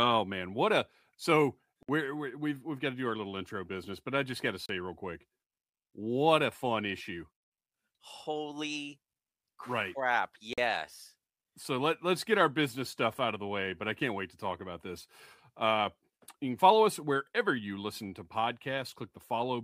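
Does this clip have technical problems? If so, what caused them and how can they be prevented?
Yes, there are three brief dropouts where the audio cuts to silence and then carries on: at 1.83 s for 56 ms, at 4.66 s for 33 ms, and at 10.53 s for 44 ms. The likely cause is a Bluetooth stall. Radio interference held up packets, so the headphones' buffer ran empty and playback paused until the resent data arrived. To prevent it, keep the phone close with a clear line to the headphones and away from busy 2.4 GHz sources like Wi-Fi routers.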